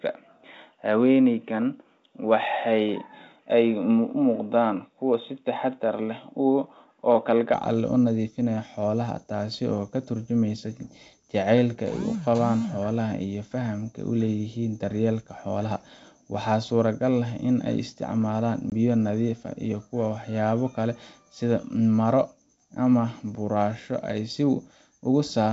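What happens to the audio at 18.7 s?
A packet-loss dropout on an ADPCM call hits between 18.70 and 18.73 s, after "ay isticmaalaan" and before "biyo nadiif ah iyo". A single packet's worth of audio becomes hard-edged silence. Unlike a plain gap, the decoder's predictor and step size lose sync with the sender's, so the speech comes back slightly distorted and settles within tens of milliseconds.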